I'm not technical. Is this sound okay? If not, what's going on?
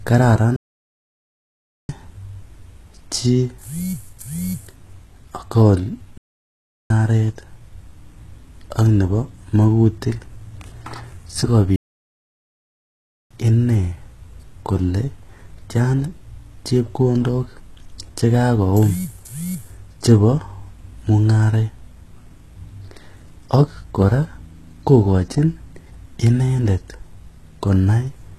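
No, not quite. Two things are going on.

The whole clip of speech carries the sound of heavy HE-AAC compression, likely from squeezing it down to a very small file. This kind of compression keeps only the lower part of the sound properly and fakes the top end by copying lower parts upward. So the treble still sounds bright, but it isn't the real thing, and s sounds come out gritty, lispy or metallic.

There are also three playback stalls, where the audio just stops dead and goes silent before carrying on. They run from 0.56 to 1.89 s, from 6.18 to 6.90 s, and from 11.76 to 13.31 s, so the gaps are roughly 1.3, 0.7 and 1.5 seconds long. That pattern is likely the player running short of data or getting held up for a moment, then picking up again.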